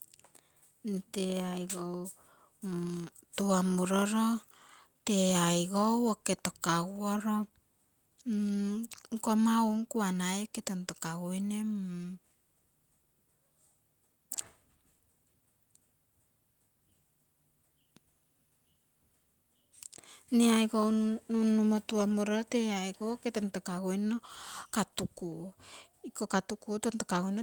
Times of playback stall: none

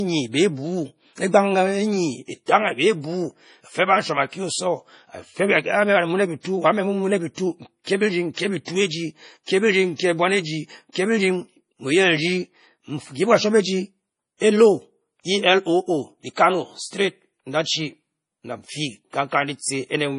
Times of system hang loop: none

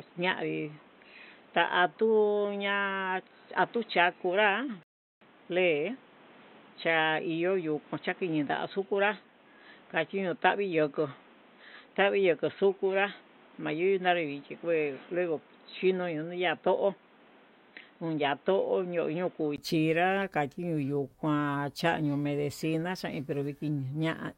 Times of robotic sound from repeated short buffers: none

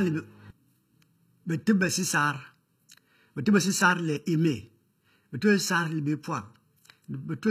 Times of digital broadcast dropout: none

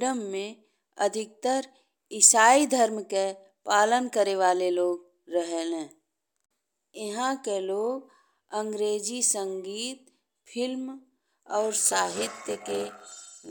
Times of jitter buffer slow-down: none

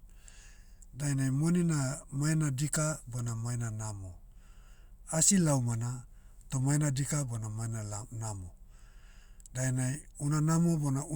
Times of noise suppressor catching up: none

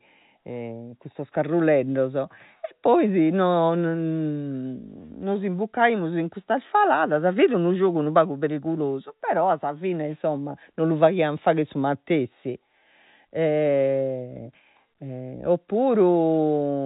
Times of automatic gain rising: none

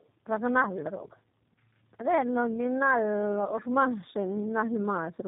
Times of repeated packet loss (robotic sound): none

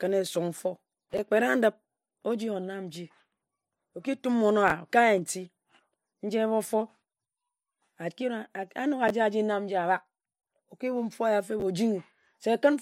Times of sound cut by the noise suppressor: none

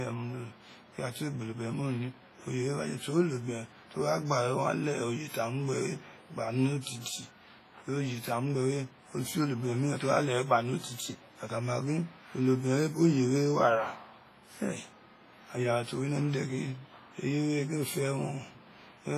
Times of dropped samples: none

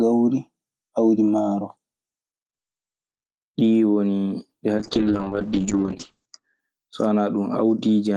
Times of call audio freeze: none

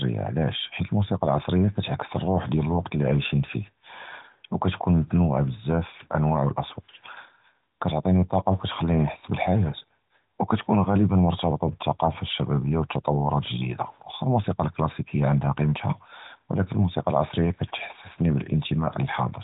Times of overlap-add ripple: none

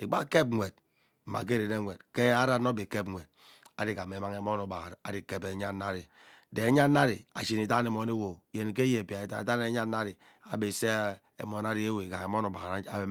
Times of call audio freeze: none

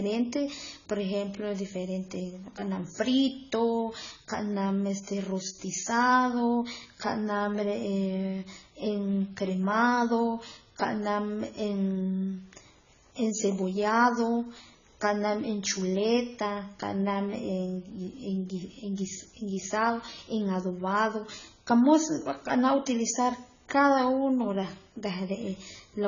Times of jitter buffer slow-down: none

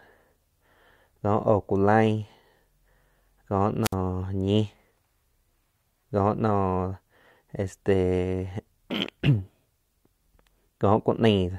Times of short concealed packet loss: none

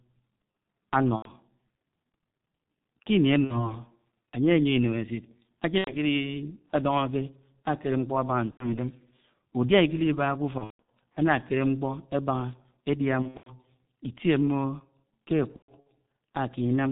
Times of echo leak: none

